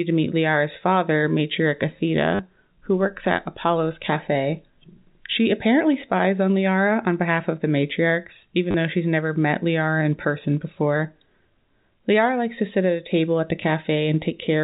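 Packet loss with last packet repeated occurs three times. The receiver fills each gap by replaying the last packet received. At 2.35 to 2.39 s, just before "who works at", 40 ms is patched. At 8.71 to 8.74 s, between "of the matriarchs even" and "though she's never met", 30 ms is patched. At 13.63 s, after "table at the", a single 10 ms repeat occurs. The repeats seldom line up with the pitch. The longer runs buzz at 100 Hz, which fits 10 ms packets, giving a brief robotic stutter over the telephone-band G.711 sound.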